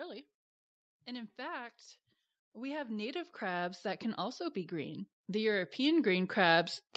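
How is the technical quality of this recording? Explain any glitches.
The recording has one clear fault, automatic gain rising, heard through a call chain whose bandwidth tops out at 8 kHz, consistent with Opus at around 48 kbps. From 2.52 s, just after "in fact", until the end, the automatic gain control judges the input too quiet and steadily raises its gain, so the speech and the background noise swell louder together over several seconds.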